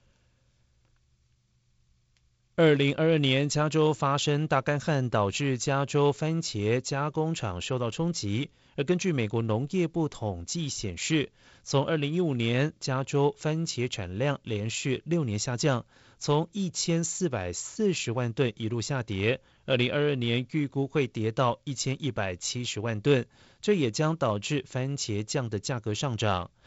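No technical faults can be heard anywhere in this speech recording. It has passed through G.722 wideband telephone coding, and the light hiss and slightly grainier lower band fit the 48 kbit/s mode, with nothing above about 7.7 kHz.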